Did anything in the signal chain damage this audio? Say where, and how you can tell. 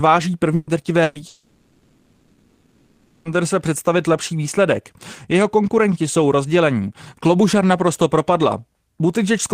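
Yes. Burst of packet loss at the network stage, twice: 0.55 to 0.70 s and 1.03 to 1.18 s. Each gap lasts about 120 ms. The receiver had nothing to decode, so it stretched the last received sound and faded it over the gap. The result is a brief held buzz or hiss where the speech should be. Speech then resumes with that 120 ms absent, a small jump forward rather than a pause.

From 1.27 to 3.38 s there is a long network dropout, likely caused by a stall in delivery rather than anything upstream. For roughly two seconds the concealment carries on, first as a fading continuation of the last sound and then as near-nothing, never true digital silence. Speech returns at "představit lepší výsledek" with about 2 s of speech gone. This is the mark of a receiver filling a gap it could not recover.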